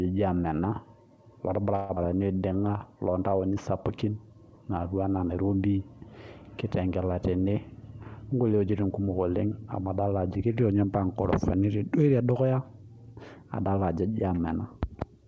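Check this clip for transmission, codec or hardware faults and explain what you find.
Three transmission faults are audible in this speech clip, all from the network and jitter buffer side, heard through a wideband call path with nothing above 8 kHz, consistent with G.722 at 64 kbps.

From 1.76 to 1.99 s comes what is likely a long network dropout. Audio stopped arriving, and the receiver stretched the last sound into a fading buzz or hiss for about 200 ms. Roughly 90 ms of speech never returns. Unlike a short packet loss, the fill lasts long enough to hear it decay.

From 2.28 to 2.79 s a jitter buffer slow-down follows. Refilling after the gap, the receiver repeated pitch periods, adding 92 ms and running at 84% speed. Syllables drag but keep their pitch, unlike a tape slow-down, and nothing is lost, unlike the dropout.

From 8.29 to 9.47 s there is a jitter buffer speed-up. Holding too much audio, the receiver cut short pitch-period slices, about 150 ms in total, so the speech runs at 110% speed. 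It sounds hurried at unchanged pitch, with no gap or fading fill as in a dropout.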